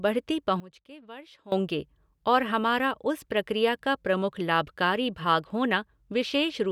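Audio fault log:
0.60–1.52 s, sudden gain jump: speech and background noise drop together by about 19 dB, then return. Likely a gain change applied without a ramp.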